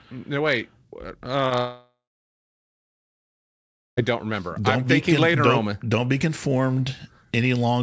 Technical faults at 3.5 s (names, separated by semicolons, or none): long network dropout